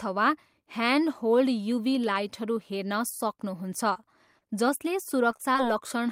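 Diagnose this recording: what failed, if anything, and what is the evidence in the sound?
Network stage: short concealed packet loss. Brief smears or wobbles at 3.93–3.97, 4.39–4.43, 5.31–5.35, 5.37–5.41 and 5.53–5.56 s each mark about 20 ms of speech arriving too late; the decoder extrapolated the preceding sound across each gap, then crossfaded back.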